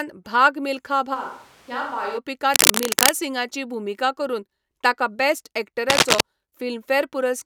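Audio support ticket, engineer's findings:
Switch to a distant microphone, 1.16–2.16 s: abrupt hollow, roomy sound, thinner bass, about 10 dB quieter, more room noise. Likely cause is the close mic dropping out, with a far mic covering.

Cable scratch noise, 2.54–3.13 s and 5.89–6.22 s: dense, uneven scratching bursts, about 5 dB above signal. Likely cause is a worn cable or connector moved, with contact resistance fluctuating.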